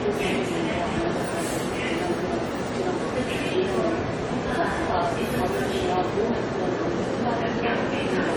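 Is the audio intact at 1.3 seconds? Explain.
No. Generation loss runs through the whole clip, including 1.3 s, and was likely caused by the sound being encoded and decoded around seven times with AAC-LC at a rate that points to 64 kbit/s. Each pass re-quantises on a shifted frame grid, so noise and spectral gaps pile up. At 1.3 s the sound is swirly, smeared and hollow, with blurred attacks and nothing above 19.9 kHz.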